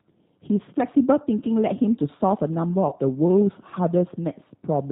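G.729 coding runs through the whole of this speech clip, with damage that is plainly audible. The codec rebuilds the voice from a vocal tract filter, a pitch predictor and a few pulses per frame, so it sounds rough and slightly synthetic, nothing above 4 kHz survives, and the thin result fits a bitrate of about 8 kbit/s. VoIP packet loss concealed by the speech codec occurs from 2.89 to 2.94 s. About 30 ms of audio went missing, which fits a single lost packet. The decoder covered the gap by stretching its last pitch and filter into a brief sound that fades, and because each frame builds on the one before, the voice stays weak for a moment after the real signal returns.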